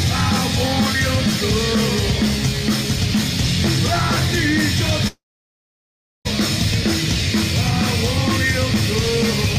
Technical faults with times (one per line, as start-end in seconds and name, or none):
5.07-6.27 long network dropout